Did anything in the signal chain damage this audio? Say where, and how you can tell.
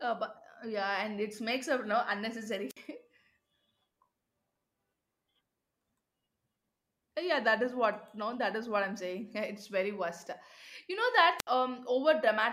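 Yes, the damage is in the analogue radio link ahead of the converter: two wireless microphone squelch dropouts, at 2.69 to 2.77 s and 11.38 to 11.47 s. In each, the RF signal fades, hiss swells briefly, and the receiver's squelch then mutes the output for about 55 ms and 68 ms before the speech returns. A waveform shows a short noisy fringe and then a flat, near-silent gap. A spectrogram shows a brief broadband haze followed by a dark vertical slot across all frequencies.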